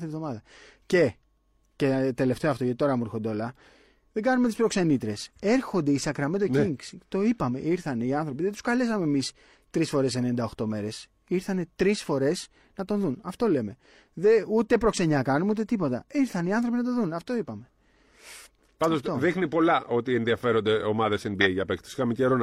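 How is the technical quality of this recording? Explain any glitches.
The speech recording has two decoder glitches, both corrupt frames decoded. The first, from 17.65 to 17.67 s, is a faint blip well down in level. The second, from 21.41 to 21.47 s, is a loud burst peaking around -10 dBFS. Each time, bits flipped inside a compressed frame, and the decoder played it anyway. The misread gains and codes put energy at the wrong frequencies for about one frame, so you hear a short chirp or noise burst.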